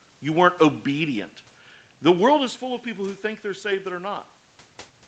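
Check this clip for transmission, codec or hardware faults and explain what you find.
The speech shows no transmission, codec or hardware faults: the top end stops at about 8 kHz, consistent with a wideband call path, room noise sits underneath, and the level shifts near 2 s and 4.5 s sound like the talker moving relative to the microphone.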